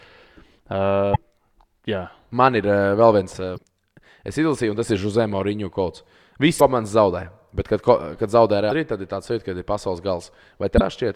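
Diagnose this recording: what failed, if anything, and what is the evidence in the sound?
The codec stage failed: damaged data in a compressed stream at 1.12–1.16 s, 3.54–3.58 s and 10.77–10.81 s, each about 40 ms. The decoder misreads the corrupted frames and resynchronises, leaving a short glitch in the speech's waveform and spectrogram at each of those times.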